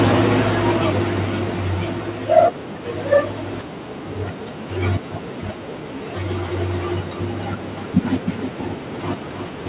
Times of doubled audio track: 6.48-9.68

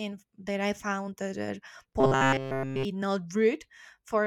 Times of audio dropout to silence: none

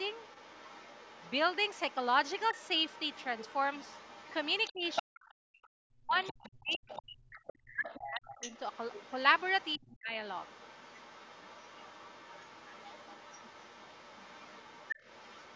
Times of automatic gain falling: none

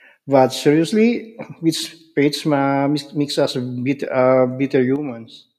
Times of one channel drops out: 4.96-5.58

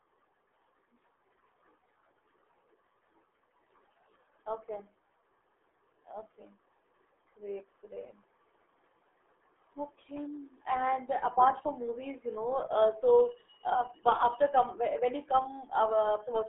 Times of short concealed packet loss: none

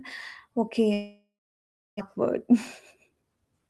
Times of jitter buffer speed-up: 3.08-3.68

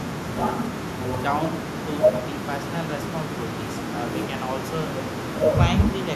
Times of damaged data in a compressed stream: none

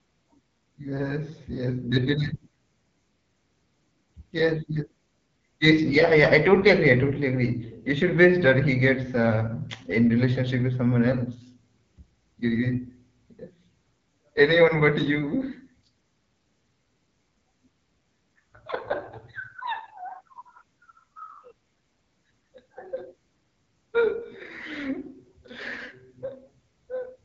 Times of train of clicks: none

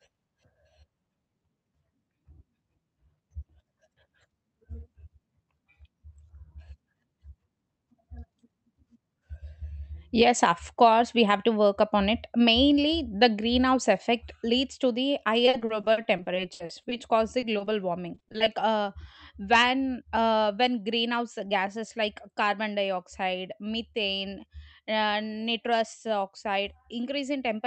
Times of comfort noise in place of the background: none

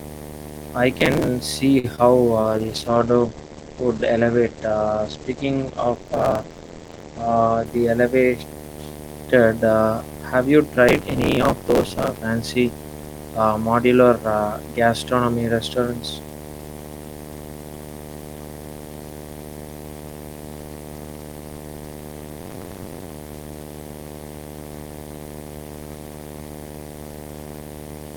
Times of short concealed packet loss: 1.96-2.00

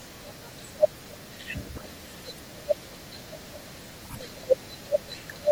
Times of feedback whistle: none

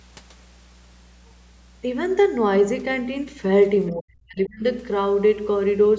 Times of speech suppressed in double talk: 3.92-4.64

